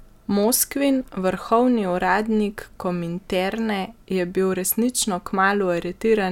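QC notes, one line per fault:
0.43 s, electrical switching spike: a single sharp snap peaking around -25 dBFS over the speech, likely a nearby switch or discharge arcing into the audio line.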